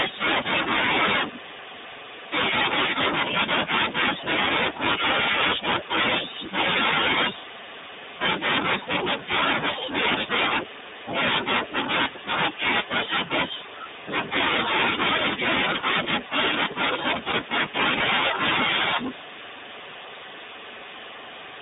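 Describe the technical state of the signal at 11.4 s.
At 11.4 s the speech carries iLBC codec damage, present across the whole clip. The signal is confined to a narrow band of about 150 Hz to 3.7 kHz, so nothing above that top edge survives. Each frame's excitation is coded on its own, and the frame rhythm fits 30 ms frames at the 13.33 kbps mode. The result is plainly audible. The speech stays clear but sounds rough, buzzy and slightly synthetic.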